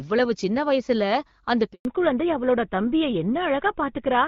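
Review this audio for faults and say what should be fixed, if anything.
A handover gap silences the speech from 1.73 to 1.85 s, about 120 ms, while the call switches networks and no speech frames arrive. It cuts to true silence within tens of milliseconds, without the smeared, buzzy fill that packet-loss concealment leaves. Preventing it needs a make-before-break handover that keeps the old link carrying frames until the new one is live.

A fallback to narrowband follows at 1.85 s and lasts to the end. Before the gap, the HD Voice sound is clear and full. After it, everything above 4 kHz is gone and the sound turns duller and rougher, which points to a drop to GSM full rate. Unlike a simple low-pass filter, it begins exactly at the handover and brings coding roughness as well as lost treble. The fix is to keep the call on a wideband-capable network or negotiate AMR-WB again after handover.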